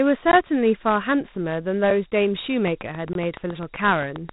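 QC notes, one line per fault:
throughout: Dialogic VOX ADPCM. The audio was stored as 4-bit adaptive differential samples, which fits a 32 kbps telephony file. Nothing is left above 3.8 kHz, so the speech sounds narrow and muffled, and the coarse quantisation leaves a plainly audible gritty hiss trailing the speech.
0.32 s and 3.13 to 3.15 s: block of digital silence. The output buffer was not filled in time, so blocks of samples came out as zeros: 16 ms first, then 21 ms, which fits a 1024-sample buffer. Each cut to silence and back is abrupt, heard as brief dropouts.
2.68 to 4.30 s: train of clicks. A repeating pulse, likely from electrical interference or a faulty connection, cuts into the signal at a steady 7.5 per second, about fifteen in all. The clicks are alike in shape, peak about 5 dB above the speech, and tick through the pauses too.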